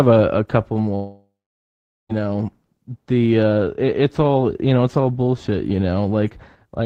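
Speech, interrupted by what is likely a long network dropout: the incoming stream stops arriving at 0.95 s and the receiver has nothing to play until 2.11 s. It conceals the gap by stretching the last sound into a fading buzz or hiss, which gives way to about 0.78 s of silence. When the audio resumes, roughly 1.14 s of the original speech is simply gone, so the speech jumps ahead rather than picking up where it stopped.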